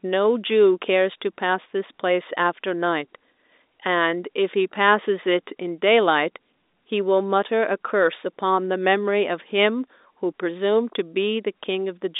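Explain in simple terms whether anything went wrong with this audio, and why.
Nothing went wrong with this speech recording; it just has the narrow, boxed-in quality you'd expect from an ordinary landline call, because telephone coding only carries a limited slice of the frequencies.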